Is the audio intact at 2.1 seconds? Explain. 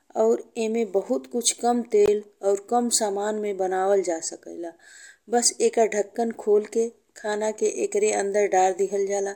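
No, not quite. Right around there, at 2.06 s, there's a gap at a join of encoded pieces. The speech drops out for about 19 ms between "ईमे बहुत कुछ कम" and "और कम सामान में", then picks up exactly where it left off. That happens when separately encoded chunks get stitched together untrimmed, so the encoder's start-up delay and last-frame padding leave a short hole with smeared edges.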